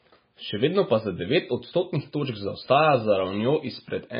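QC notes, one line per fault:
Throughout, MP3 compression: the encoder, likely starved of bits at a very low bitrate in the region of 16 to 20 kbps, cut everything above 5 kHz and zeroed weak frequency lines frame by frame, leaving the speech dull, watery and swirly.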